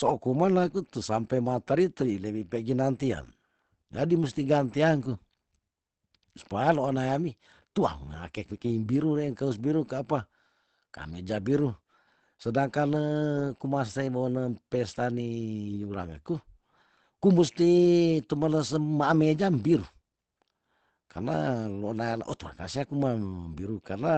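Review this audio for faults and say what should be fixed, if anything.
Throughout the speech there is a muffled, hoarse quality, and nothing is present above about 8.6 kHz. The likely cause is Opus compression running in its speech-oriented SILK mode at wideband, which models the voice with a compact set of parameters and discards the upper spectrum, consistent with a rate near 16 kbps. Unlike MP3 damage, there is less swirling or watery warble, and unlike a plain low-pass filter, the voice itself sounds rough and coarsened.

To prevent it, encode at a higher Opus bitrate, or keep an uncompressed master and compress only the final delivery copy.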